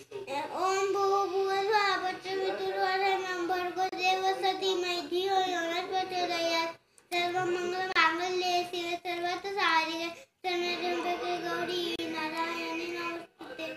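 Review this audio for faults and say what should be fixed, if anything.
Three gaps at a join of encoded pieces break the sound at 3.89 to 3.92 s, 7.92 to 7.96 s and 11.96 to 11.99 s, each about 32 ms long and spaced about 4 s apart. Each piece was encoded on its own, so its start-up delay and padded final frame left short silences where the pieces meet. Unlike a network dropout, the gaps recur on a strict 4 s grid, have smeared edges, and the sound resumes exactly where it stopped. To prevent this, trim each piece's encoder delay and end padding, or encode the joined audio as one continuous stream.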